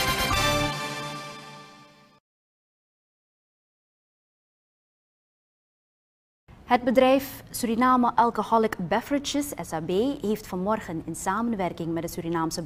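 No technical faults are audible anywhere in the audio.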